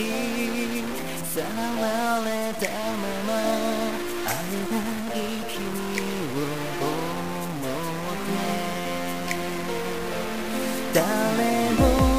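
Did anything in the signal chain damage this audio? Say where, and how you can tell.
Yes, the whole clip carries distortion, and even the quiet gaps fill with a gritty noise floor rather than going silent. That's likely a stuck bit at the converter or its data line, with one bit fixed, knocking roughly half the samples off by that bit's weight.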